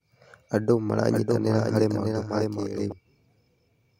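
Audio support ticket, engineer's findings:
Doubled audio track, 1.10–2.92 s: second full-band copy of the speech trailing by about 0.7 s, roughly 5 dB down. Likely a slower parallel capture path mixed in. Not room echo: single repeat, no decay or reverb colour, abrupt onset and cutoff.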